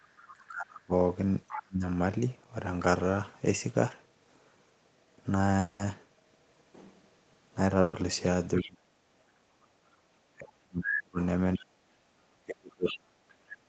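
Right at the start, 0.0 to 0.33 s, there's a faint second voice, about 25 dB under the speech. That's the other side's voice leaking through, likely loudspeaker echo the canceller didn't fully remove.

From 0.34 to 1.82 s the speech dips and breaks up, at worst by roughly 30 dB, for about 0.7 s in total. That's speech suppressed in double talk, with the canceller likely ducking both sides at once. The far voice pokes through again at 1.48 to 1.62 s, much louder this time, only about 10 dB down.

At 5.59 to 5.81 s there's a long network dropout, likely lost packets. About 200 ms of audio goes missing, and a fading buzz or hiss covers the hole.

A burst of packet loss hits at 7.81 to 7.95 s. About 120 ms is lost, papered over with a held, fading tail of the previous sound.

More leaking follows at 8.56 to 8.70 s, about 15 dB down. Then a long double-talk stretch runs from 8.58 to 13.15 s, with drops of up to roughly 40 dB adding up to about 2 s. 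Inside that, at 9.08 to 9.27 s, the room background briefly sinks about 7 dB for roughly 150 ms as the canceller gates the mic. The far side leaks in once more, faintly at 11.56 to 11.60 s (about 30 dB down) and loudly at 12.87 to 12.98 s (about 10 dB down).

Throughout, the call path caps everything at 8 kHz.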